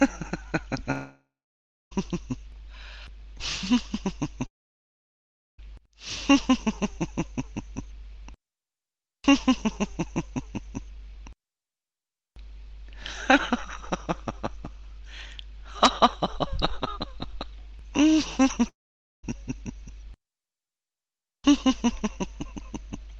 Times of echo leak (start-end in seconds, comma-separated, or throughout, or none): none